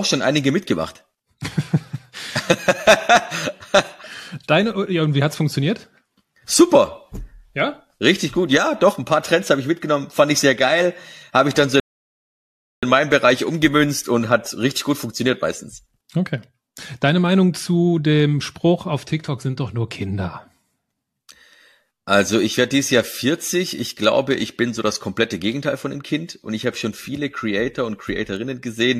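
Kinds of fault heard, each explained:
Rebuffering stall: the player ran dry of downloaded audio and halted until more data came in. After "habe ich dann so" the speech drops to silence for about 1.03 s, then picks up with "in meinem" with nothing missing. A waveform shows a flat gap, and a spectrogram shows a blank vertical band.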